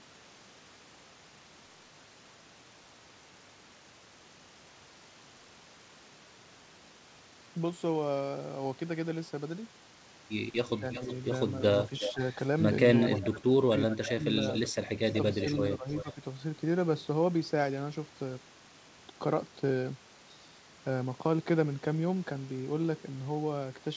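From 10.79 to 12.21 s the speech dips in short patches, only around 150 ms in total and about 10 dB at worst. That's likely speech suppressed in double talk: the echo canceller couldn't tell the talker from the returning loudspeaker sound and turned everything down. Overlapping that, from 10.93 to 13.22 s, there's a faint second copy trailing the voice by 361 ms, roughly 10 dB under it, which sounds like echo leak.

From 13.21 to 16.07 s the suppression comes back harder, with dips of about 20 dB adding up to around a second. From 14.47 to 16.1 s the echo returns at 369 ms behind, now about 15 dB down, still audible as a ghostly repeat. Everything sits under an 8 kHz ceiling, which fits a wideband call codec like G.722.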